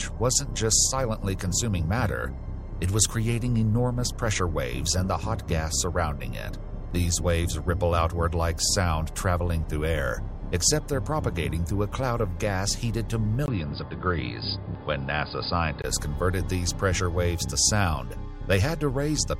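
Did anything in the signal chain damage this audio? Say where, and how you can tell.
Yes. Input switched to a poorer device, 13.46 to 15.84 s, likely at the driver level: after a 20 ms gap, nothing above 4.9 kHz, faint new noise, same level.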